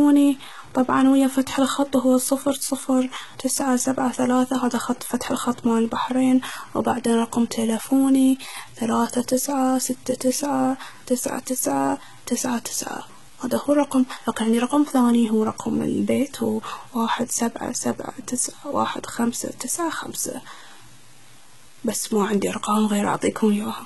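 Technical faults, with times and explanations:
Throughout, low bit depth without dither. The speech carries a grainy, gritty distortion that follows the signal, sitting about 30 dB below it. Quiet passages break up rather than fade smoothly. This likely comes from truncation without dither, and fits about 7 bits.
Throughout, HE-AAC compression. The codec damage is heavy, and nothing remains above 11.8 kHz. The treble is rebuilt from lower bands, so s sounds turn metallic or lispy. This likely comes from HE-AAC v2, and fits a bitrate near 16 kbps.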